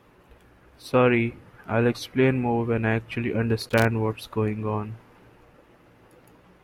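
A worn or dirty contact in the signal path, making and breaking as it shifted, chopped this speech recording between 3.61 and 3.85 s. The result is loose connector crackle: an irregular quarter-second burst of scratchy crackle breaking through the sound.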